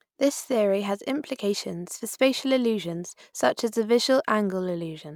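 No technical faults can be heard anywhere in this speech recording. There is no moment in the audio that calls for a timestamp or a closer look.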